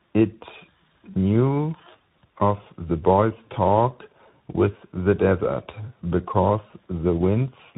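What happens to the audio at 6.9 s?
At 6.9 s you're hearing tandem speech coding, and it runs the whole clip. The speech seems to have been decoded and re-encoded at each link, likely a low-rate speech coder followed later by a delta-modulation stage along the lines of 64 kbit/s CVSD, each working on the last one's damage. It comes out rough, warbly and muffled, with nothing above 3.8 kHz.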